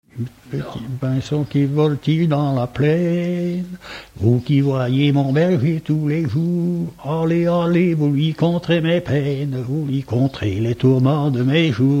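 No technical faults can be heard anywhere in the recording, and the signal holds steady throughout.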